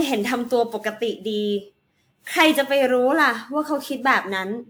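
Throughout the speech, from start to finish, the sound is swirly, smeared and hollow, with consonant attacks blurred rather than crisp. This is generation loss, likely from repeated lossy decoding and re-encoding, around seven passes, with a character that fits a WMA 1 codec at about 128 kbit/s. Each pass requantised on a shifted frame grid, so the noise piled up. A spectrogram would show scattered holes and blotchy, time-smeared energy.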